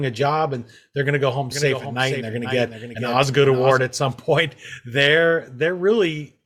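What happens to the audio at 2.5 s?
At 2.5 s the speech is heard twice: a doubled audio track runs from 1.52 to 3.82 s, with a full-band copy around 10 dB quieter trailing by about half a second, likely from a second, slower capture path. Unlike an echo, it has no decay or room colour and starts and stops abruptly.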